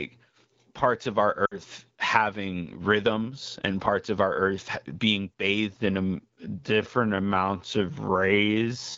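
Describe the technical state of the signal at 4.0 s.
At 4.0 s the signal is intact, with no fault present at that moment.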